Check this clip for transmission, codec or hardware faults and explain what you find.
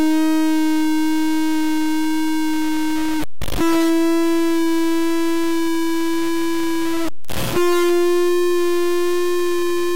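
One hardware fault runs through the music from start to finish.

Stuck bit, throughout: a harsh, buzzy distortion sits on top of the music the whole way, and quieter passages fill with a gritty noise floor instead of falling silent. The likely cause is one data bit held at a fixed value by a broken line or converter, so about half the samples jump by that bit's weight, roughly a -15 dBFS step, in a pattern that follows the waveform.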